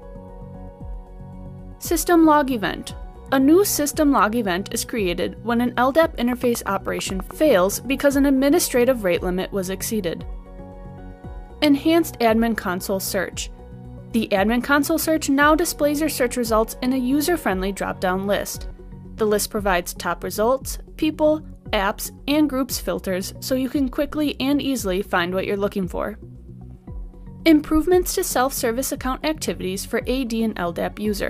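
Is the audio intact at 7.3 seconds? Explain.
No. At 7.3 seconds the audio is near the end of a train of clicks running from 6.33 to 7.32 s: roughly ten sharp pulses at a regular 9.2 per second, peaking about 10 dB above the surrounding sound. The likely cause is interference or a faulty connection or power supply injecting the same pulse repeatedly. It is heard as steady ticking laid over the audio. A waveform shows evenly spaced narrow spikes, and a spectrogram shows thin, evenly spaced vertical broadband lines.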